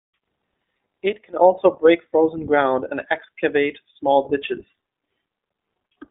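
Throughout, the speech carries iLBC codec damage: narrowband coding in 20 ms frames cuts everything above 3.8 kHz, leaving it muffled, plainly rough and synthetic, consistent with about 15.2 kbps.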